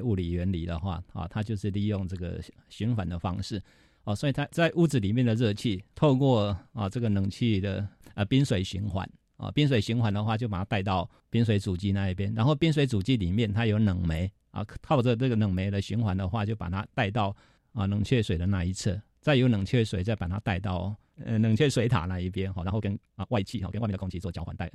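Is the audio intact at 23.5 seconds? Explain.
No. A time-stretched section spans 22.55 to 24.74 s. Speech runs 1.8 times faster at unchanged pitch. It sounds rushed, likely from dropped short pieces.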